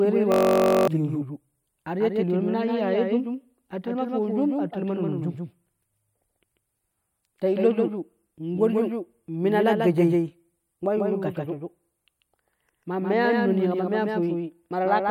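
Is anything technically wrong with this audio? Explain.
Yes, two faults are audible.

From 0.32 to 0.88 s there is a system hang loop. One 21.33 ms slice of sound repeats exactly at 46.9 Hz, which fits a 1024-sample buffer cycling while the system froze. It sounds like a steady buzz rather than a stutter, and it replaces roughly half a second of speech. Unlike electrical hum, it starts and stops abruptly.

Throughout the clip there is a doubled audio track. A full-band copy of the speech sits about 150 ms behind the original and about 5 dB quieter. This is likely caused by a second, slower capture path. It differs from room echo or reverb because the copy has no decay, no added room colour, and no further repeats.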